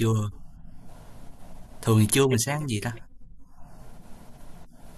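No faults turn up anywhere in this recording, so there's nothing to flag along the way.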